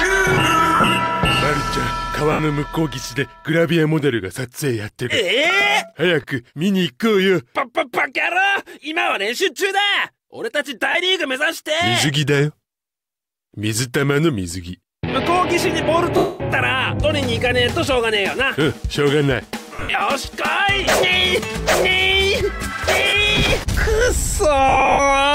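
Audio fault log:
0.75–0.87, 2.32–2.39, 6.22–6.24, 10.92–10.95, 16.17–16.40, 19.75–20.01, 23.08–23.14, 24.69–24.99 s, lost LE Audio frames: the decoder repeats the last spectrum with randomised signs, smearing the sound into noise; longer gaps, like 230 ms at 16.17 s, fade toward silence.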